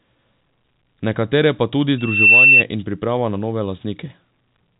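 A microphone picking up its own loudspeaker drives the loop past unity gain at 2.7 kHz, so this telephone-band speech, carried over G.711 coding, has a loudspeaker feedback squeal from 1.98 to 2.64 s. The tone swells over about a third of a second to roughly 10 dB above the speech.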